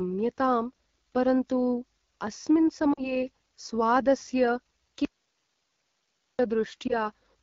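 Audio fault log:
Throughout: AMR wideband (HD Voice) codec at 8.85 kbit/s, one of its lowest rates, so the pulse-driven vocal model leaves speech plainly rough and raspy.
2.93–3.12 s and 6.87–6.94 s: lost AMR speech frames. The decoder repeats the last pitch and tract settings at falling gain, giving a drop to near silence, then a brief warble, that fit about 40 ms, then 20 ms, lost.
5.05–6.39 s: audio dropout to a faint residue. Speech cuts abruptly to hiss about 45 dB down for 1.34 s, likely a lost signal feeding a path that stayed live.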